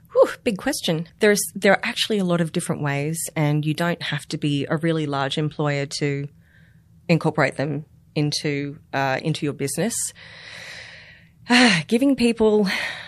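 Pre-echo sits at 4.28 s, between "and you don't have" and "to be a really", as a short hiss of about 19 ms rising roughly 10 dB ahead of an attack. The codec spread quantisation noise sized for the loud onset across its whole transform block, so the quiet instant before it was filled too. The spread fits a block of around 36 ms and points to a codec that never switched to short blocks, leaving the attack softened and smeared.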